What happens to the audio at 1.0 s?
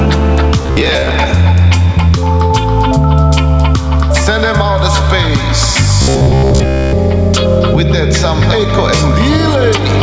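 Audio likely arrived too seldom between 0.62 and 1.10 s, so the last short buffer was replayed to fill the gaps, standing in for about half the real audio. The repeats impose a fixed buzz near 67 Hz, which fits a buffer of about 15 ms, giving a rigid, metallic robotic sound from repeated short buffers.

Gain pumping, present throughout, is also at work here: input gain set too high, with a fast limiter likely pulling it down on each loud sound. The level swings by about 5 dB, squashing the dynamics.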